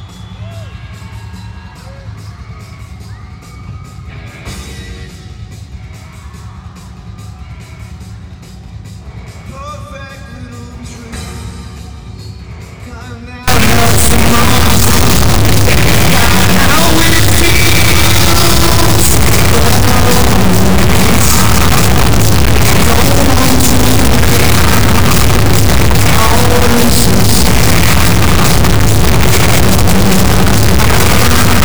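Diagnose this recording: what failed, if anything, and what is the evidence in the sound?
The fault is in sample-format conversion: integer read as float. From 13.48 s to the end, the sound becomes an extremely loud, buzzing square wave that drops to silence in quiet passages. The output jumps between zero and the clipping limit, which fits 32-bit integer samples being read as 32-bit float.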